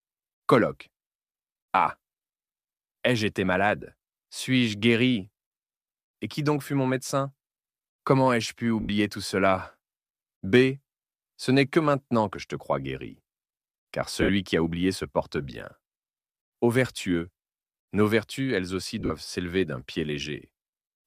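Lost LE Audio frames at 8.81–8.89 s, 14.21–14.29 s (about 70 ms scattered over 80 ms) and 19.00–19.10 s (longest gap about 40 ms). The decoder concealed each gap by repeating the last spectrum with randomised phase, so the sound briefly smears into noise and fades.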